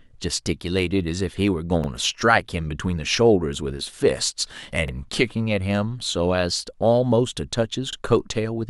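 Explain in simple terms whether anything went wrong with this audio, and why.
Yes, something went wrong: overlapping chunks. The speech was handled in 3-second pieces, and each piece began 44 ms before the last one finished. That tiny slice plays twice at every join, making a brief stutter at 1.84, 4.88 and 7.93 s.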